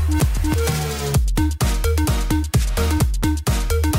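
At 3.00 s a sharp double pop, two quick thumps within about a quarter second (ending near 3.25 s), jumps out a few decibels above the sound, which continues beneath it. This loud pop is likely a sudden voltage pulse, from a plug, switch, static or driver glitch, entering the signal path.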